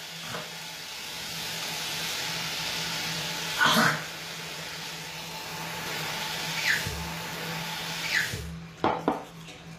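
Throughout, the treble is likely rebuilt by HE-AAC compression at a rate that fits about 24 kbps, so the top band sounds gritty and metallic and stops at 15.5 kHz. From 5.86 s to the end, a doubled audio track appears, likely from a second, slower capture path. An equally loud copy trails by about one and a half seconds and enters abruptly without any decay.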